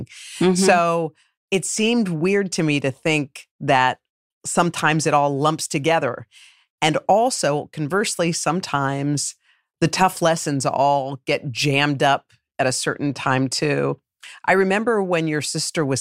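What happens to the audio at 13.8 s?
Nothing goes wrong at 13.8 s; the speech carries on intact through that moment, with no break, glitch or change in level.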